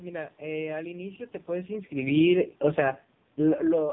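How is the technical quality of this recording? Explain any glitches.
The technical quality is poor, because the speech has been squeezed through a low-rate mobile codec for the whole clip. The heavy AMR narrowband mobile codec damage runs from start to finish. Nothing above 3.7 kHz survives, so the speech sounds thin and boxed in. The codec rebuilds speech from a vocal-tract model fed by a few pulses. The heavy buzz and synthetic edge fit a bitrate near 5 kbps. The room's background noise turns into a warbly swirl.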